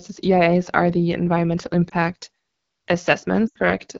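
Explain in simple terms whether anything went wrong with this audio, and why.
Yes, two things went wrong. Throughout, the speech passes through the AMR wideband (HD Voice) codec at a low setting. It rebuilds the voice from a simple model of the throat and fills the highest tones with shaped noise, which is why the speech sounds rough and raspy.

There are also lost AMR speech frames. At 1.89 to 1.94 s, right after "are the environmental", a brief dip or warble is heard, which fits a single lost 20 ms frame. At 3.47 to 3.57 s a longer gap of about 80 ms quickly drops the sound to near silence before the voice returns weak or rough. Each time, the decoder reused the last good sound with falling volume to cover the missing audio.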